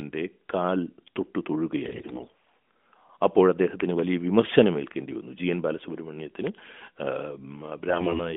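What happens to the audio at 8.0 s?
From 7.88 to 8.34 s the speech is hit by AMR bit errors: on a weak link, roughly a tenth of the less protected bits in the AMR-NB frames arrive flipped while the check on the key bits still passes. Excitation pulses land in the wrong places and fine pitch, gain and spectral values drift. Pitch and loudness roughly hold, but the sound turns hoarse, scratchy and gargly. On a spectrogram the harmonic striations below the 3.5 kHz line edge break into ragged, noisy smears, while the waveform keeps its envelope but grows jagged and irregular within each cycle.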